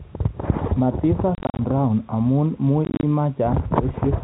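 Packet loss filled with silence hits from 1.35 to 1.59 s and again from 2.85 to 3.03 s. Missing packets were replaced by digital silence, so the speech breaks into short scattered dropouts with hard edges: about 160 ms lost across 240 ms in the first burst, 120 ms across 180 ms in the second, no gap longer than 40 ms. The 10 ms steps fit 10 ms packets, all over the band-limited G.711 telephone sound.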